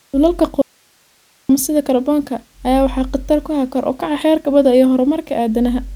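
The signal path likely lost its input for a moment while the stages after the break stayed live, producing an audio dropout to a faint residue from 0.62 s to 1.49 s. For about 0.88 s the speech vanishes abruptly, leaving only hiss roughly 40 dB below the normal level, with no fade on either side. The speech then snaps straight back in at "sida kaarboonka ayaa waxaa", cut off mid-flow rather than resuming after a natural pause.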